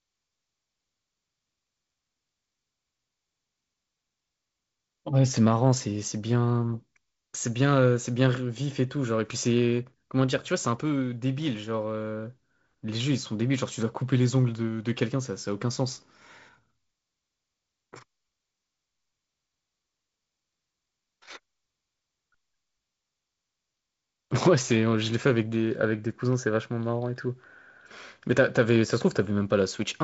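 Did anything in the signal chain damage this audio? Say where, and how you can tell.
No, nothing in this speech stood out on listening as damage from any stage of the chain, and the band-limited top end heard here is simply what wideband G.722 telephone coding at 48 kbit/s sounds like.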